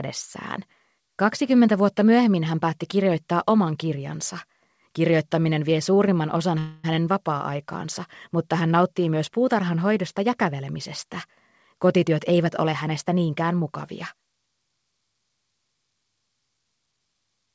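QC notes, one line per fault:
5.94 to 5.98 s, short stall from a late packet: a sound is held about 20 ms too long. A packet arrived late, so the receiver stretched the last sound, then resumed.
6.59 to 6.86 s, call audio freeze: the audio stops moving and a fading buzz fills about 250 ms, never reaching silence. The likely cause is packets held up in transit, emptying the jitter buffer. Playback resumes where it stopped.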